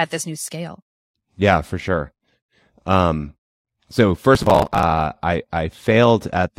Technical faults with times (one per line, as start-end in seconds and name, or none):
4.35-4.83 processor overload crackle